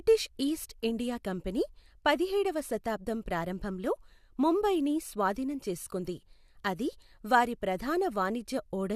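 A short speech recording, and there's nothing technically wrong to point to anywhere along the way.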